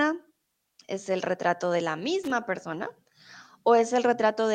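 A worn or dirty contact somewhere in the signal chain is making and breaking as it shifts, producing loose connector crackle in this speech recording: from 2.23 to 2.31 s the signal is chopped into a brief, irregular burst of scratchy crackle.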